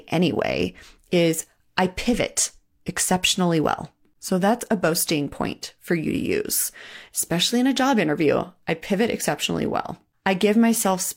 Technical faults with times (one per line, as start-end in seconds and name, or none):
none